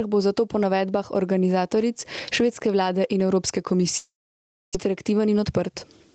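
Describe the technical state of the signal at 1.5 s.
At 1.5 s the speech has gain pumping, present throughout the clip. The gain swings by around 20 dB. The likely cause is gain set far too high, with a fast limiter clamping down. The sound is squashed.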